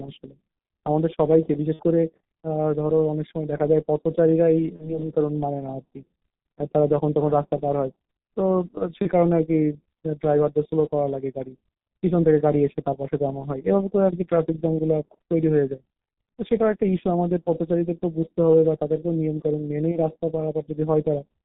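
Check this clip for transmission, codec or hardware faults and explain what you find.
Two faults are present: heavy low-bitrate codec coding throughout, and five short packet-loss dropouts.

G.723.1 codec, throughout: coding at 6.3 kbit/s in 30 ms frames discards everything above 4 kHz, leaving muffled, hoarse speech with smeared consonants.

VoIP packet loss concealed by the speech codec, at 1.73–1.83, 4.76–4.99, 9.02–9.07, 16.39 and 19.91–19.99 s: the decoder bridged missing packets by extrapolating, producing brief stretched, fading sound. The first gap suggests two lost frames.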